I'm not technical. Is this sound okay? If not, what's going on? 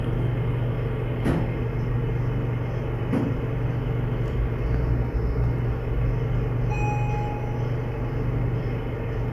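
Yes, it's fine; nothing in this sound glitches, cuts out or breaks up, so there's no problem to worry about.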